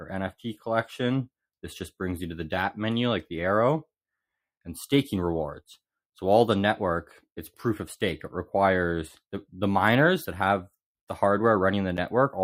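Nothing technical stands out here; the audio runs along without any problem you could hear.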